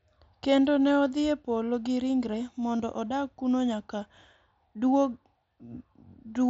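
At 2.77 to 2.80 s, between "gi ringre" and "odag kuno nyaka", concealed Bluetooth headset packet loss repeats the preceding waveform for roughly 22 ms, a brief buzzy patch with a repeated waveform cycle and a smeared spectrogram band.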